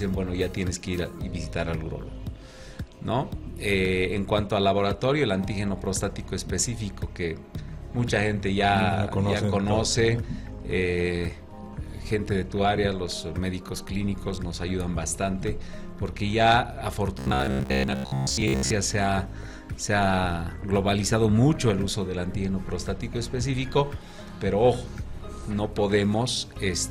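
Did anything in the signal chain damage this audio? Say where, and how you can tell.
Yes, from 17.19 to 18.71 s the sound turns into a rigid, metallic buzz at 66.7 Hz, the robotic sound from repeated short buffers. The driver or buffer stage likely starved and replayed roughly 15 ms chunks in place of most of the real audio.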